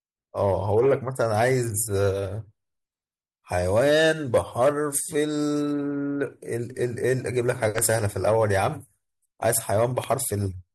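Loud pops hit this speech recording at 7.78–7.80 s and 10.04–10.06 s, single sharp thumps about 15 dB and 10 dB above the speech, which carries on underneath. They likely come from a brief voltage spike, such as static or a switch transient, entering the signal chain.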